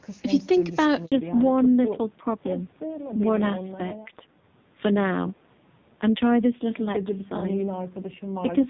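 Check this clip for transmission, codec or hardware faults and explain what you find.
Two transmission faults are present, both tied to a network switch early in the call.

At 1.06 to 1.12 s there is a handover gap. The call moved between networks, and no speech frames arrived for about 60 ms. The speech fades out quickly and drops to silence. What was said in that instant is lost.

From 1.12 s to the end, the call shows a fallback to narrowband. Before the switch, the HD Voice link sounds clear, which fits AMR-WB near 23.85 kbit/s. Afterwards nothing remains above 4 kHz. The speech turns dull and rough, which points to AMR-NB at a low rate near 5.9 kbit/s.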